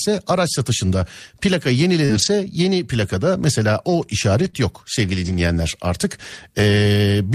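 At 2.05 s, just after "araç satışında plaka", there is a short concealed packet loss. About 40 ms of audio arrived too late for the decoder. The receiver filled 34 ms by carrying the previous sound forward, then faded back into real audio. A small amount of time was added overall. It sounds like a brief smear or wobble.

Overlapping this, from 2.09 to 2.28 s, is a lost packet rebuilt from error correction. For 100 ms the decoder played low-bitrate backup copies sent in the following packets, which points to several separate lost packets. There is no gap, but the sound turns rough and grainy before "yeni plakada mesela o".

The same repair happens from 4.38 to 4.48 s, just before "yok sevgili". About 60 ms sounds coarser and noisier.

From 4.50 to 4.55 s comes a second short concealed packet loss. About 20 ms went missing, and 28 ms of continued sound covers it. It is heard as a quick smudge.

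The last error-correction rebuild runs from 5.25 to 5.35 s. It lasts about 60 ms and sounds grainy.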